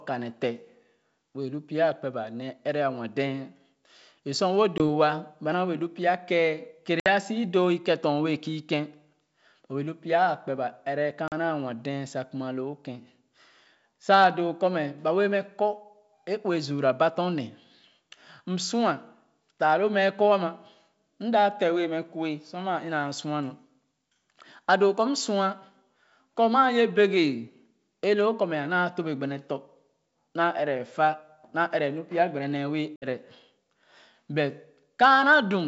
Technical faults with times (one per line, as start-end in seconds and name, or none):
4.78-4.84 packet loss on an ADPCM call
7.00-7.10 packet loss on an ADPCM call
11.28-11.33 packet loss on an ADPCM call
32.96-33.06 packet loss on an ADPCM call